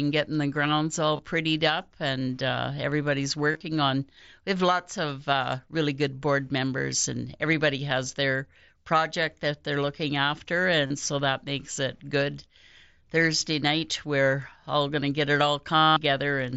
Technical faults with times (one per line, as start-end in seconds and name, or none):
1.17-1.19 concealed Bluetooth headset packet loss
3.51-3.61 concealed Bluetooth headset packet loss
10.86-10.90 concealed Bluetooth headset packet loss
15.75-15.97 concealed Bluetooth headset packet loss